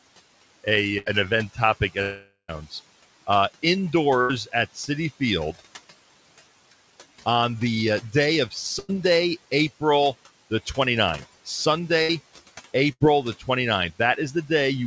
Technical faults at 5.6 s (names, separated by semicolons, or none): noise suppressor artifacts